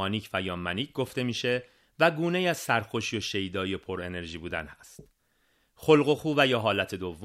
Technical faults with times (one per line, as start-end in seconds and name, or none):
none